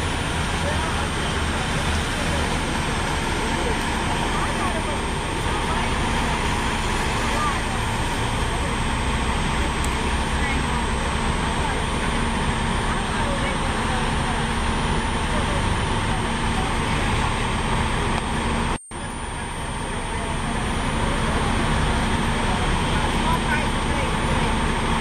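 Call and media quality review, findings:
Switching supply whistle, throughout: high tone wandering between 8.5 and 9.2 kHz, roughly 20 dB under signal. Supply in audible burst mode or beating; the moving pitch rules out a fixed pilot tone.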